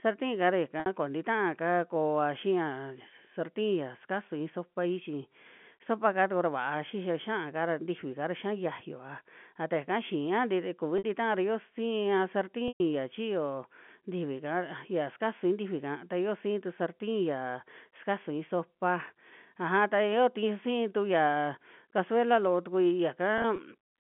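At 0.80–0.86 s and 10.98–11.04 s, 60 ms gaps show packet loss with pitch repetition. The receiver loops the last pitch period, giving a briefly held, buzzy tone, and a spectrogram shows frozen harmonic stripes. The 120 ms loss at 12.68–12.80 s fades toward silence before a cross-fade. At 23.38–23.58 s, short losses of up to 20 ms each, fitting single packets, scatter across 200 ms as small repeated waveform cycles. The narrow G.711 telephone band holds throughout.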